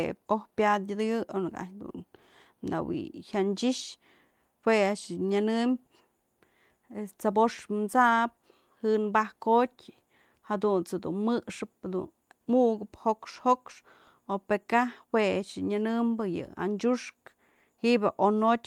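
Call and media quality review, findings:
Nothing stood out on listening.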